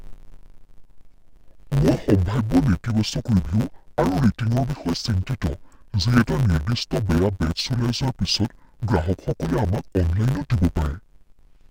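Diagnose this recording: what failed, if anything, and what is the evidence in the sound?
The failure is at the sample-format conversion stage: interleaved audio read as planar, present from start to finish of the speech. Each 10 ms block of alternating left and right samples was split so its first half fed one channel and its second half the other, each played at half speed. Because the blocks are this short, there is no clear octave drop. The speech instead sounds dull and robotic, with a steady buzz at 100 Hz, the block rate.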